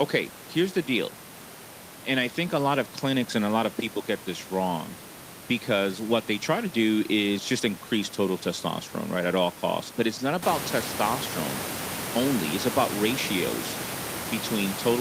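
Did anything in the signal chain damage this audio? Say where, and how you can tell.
No, no stage of the chain damaged this speech; the room noise that rises by about 11 dB a little after 10 s, leaving it only about 9 dB under the speech, belongs to the acoustic space at the microphone, not to any system stage.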